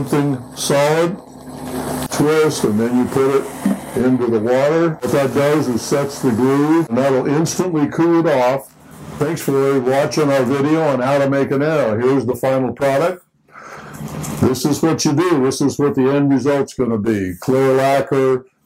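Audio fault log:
12.31–12.34 s, corrupt frame decoded: there's a quick, harsh blip here, about 24 ms long, fairly loud, peaking somewhere around -10 dBFS. It sounds like a single compressed frame picked up flipped bits and the decoder played it anyway. The garbled gains and codes throw energy into frequencies that don't belong there, so you get a brief chirpy burst lasting roughly one frame before the next clean frame takes over.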